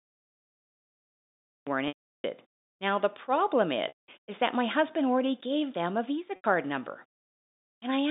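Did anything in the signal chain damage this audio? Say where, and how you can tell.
Yes. The opening is digital silence until 1.67 s, where the speech begins abruptly mid-sound with no natural attack, a cut-off start. This is a storage or capture fault: the recording or stream began late, so the start of the sound was never written.

Speech stalls three times, at 1.88 to 2.24 s (360 ms), 3.88 to 4.08 s (200 ms) and 6.36 to 6.44 s (80 ms). This is packet loss with pitch repetition, a network fault. The 80 ms gap sounds like a briefly held, buzzy tone. The two longer gaps buzz, fade to silence over about 50 ms, then cross-fade back into the speech. The receiver bridged each gap by repeating the last pitch period, and the lengths fit lost 20 ms packets. The G.711 telephone coding path around them confines the audio to roughly 200 Hz to 3.7 kHz.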